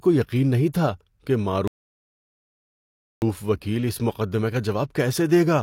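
The player's buffer ran dry and the speech halts from 1.68 to 3.22 s after "یقین نہیں تھا کہ", a rebuffering stall adding 1.5 s of silence before "وکیل اِس مقدمے کا" resumes intact.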